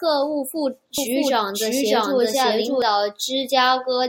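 A second, slower capture path likely mixed the speech in twice after "务副": from 0.98 to 2.82 s a doubled audio track trails about 0.7 s behind, as loud as the original, starting and stopping abruptly.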